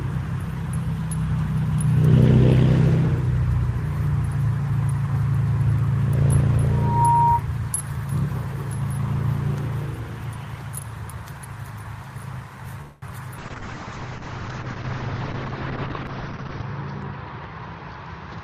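At 12.81 s a call audio freeze begins and lasts until 13.04 s. The last sound is stretched into a fading buzz for about 207 ms, most likely because delayed packets drained the jitter buffer. On a waveform this is a decaying smear, and nothing is lost when playback resumes.

From 13.40 s to the end, a call bitrate drop takes the stream from 40 kbps to 7 kbps, holding at the lowest rate for 3.3 s. The audio turns rough and muffled as coarser coding sets in. A spectrogram shows the energy above 6 kHz abruptly cut off, where it had reached 20 kHz.

Between 15.98 s and 17.62 s a jitter buffer speed-up plays the audio at about 109% speed without changing pitch. The receiver trimmed repeated short pitch-period slices, roughly 150 ms in all, to shed excess delay. The waveform shows small splice joins.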